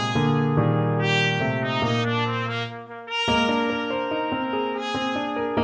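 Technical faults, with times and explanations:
No technical faults can be heard, with no times or explanations to give.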